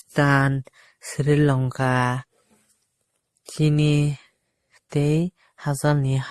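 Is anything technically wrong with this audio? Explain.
Yes. Throughout the speech, nothing sounds above 12.2 kHz, and two distinct sets of coding artefacts overlap. This is likely transcoding between lossy codecs, pointing to MP3 at 48 kbit/s re-encoded as Opus at 32 kbit/s.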